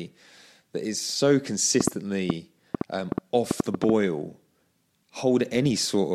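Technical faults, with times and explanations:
1.81–3.90 s: train of clicks, about ten sharp pulses at an uneven 5.3 per second, roughly 15 dB above the speech, likely from nearby interference; each shows as a thin vertical spike on the waveform and a full-height line on the spectrogram.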